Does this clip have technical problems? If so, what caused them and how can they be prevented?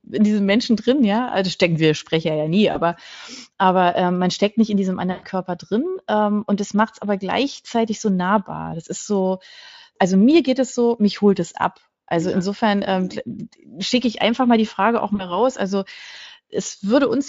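Yes. VoIP packet loss concealed by the speech codec occurs at 2.71 to 2.79 s, 5.11 to 5.24 s and 15.15 to 15.38 s. Packets went missing. The Speex decoder filled each hole by repeating its last pitch and filter at falling gain. The speech smears into a buzzy tone or a coloured noise that fades. The first and last dropouts cover 40 ms of lost audio, and the middle one covers 120 ms, so it sags longest. The weakness lingers briefly as the decoder recovers. A steadier network path, forward error correction or a deeper jitter buffer would prevent this.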